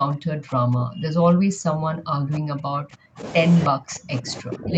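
Speech, with the talker heavily attenuated from 0.00 to 3.23 s and again from 3.68 s to the end. The level sinks by roughly 40 dB, leaving a thin, gated trace, which points to speech suppressed in double talk, likely an echo canceller mistaking the local voice for loudspeaker echo while both sides spoke. On a waveform these stretches collapse to a near-flat line. A spectrogram shows faint, broken energy under the 8 kHz ceiling of the call path.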